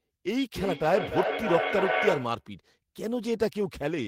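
Speech with feedback echo between two devices from 0.55 to 2.48 s: each word returns at a fixed interval of roughly 300 ms, peaking at about 2 dB below the speech itself. Two devices in one room on the same call are feeding each other. One plays what the other's microphone sent, that microphone picks it up again, and neither echo canceller removes the other device's playback. The steady interval and near-speech level distinguish it from room reverberation, which smears into a decaying tail rather than returning as a distinct delayed copy.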